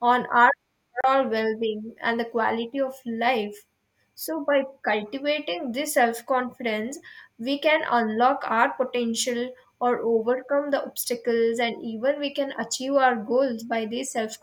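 At 1.01 to 1.04 s, the receiver briefly lost good data, with the incoming frames either missing or failing their checksum, so it muted its output until valid frames resumed. This is a digital broadcast dropout. In the speech it sounds like a short, clean hole of about 32 ms, a tiny gap of silence before the sound returns. The gap's length fits a single lost frame, and the speech that fell in it is gone.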